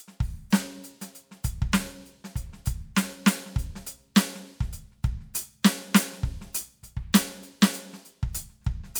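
Music with no technical faults.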